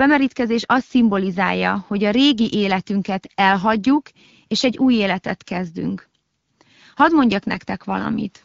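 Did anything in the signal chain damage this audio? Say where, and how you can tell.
Yes: AMR bit errors on the network link. From 7.54 to 7.64 s the speech turns hoarse and gargly, as flipped low-priority bits misplace excitation pulses.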